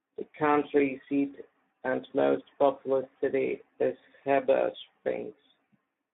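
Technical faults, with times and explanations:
Throughout, Speex codec damage. The speech sounds hoarse and noisy, with a rough, buzzy grain. That fits a low Speex setting near 11 kbps, which leaves too few bits to rebuild the excitation. The band runs only from 150 Hz to 3.5 kHz, so it sounds thin.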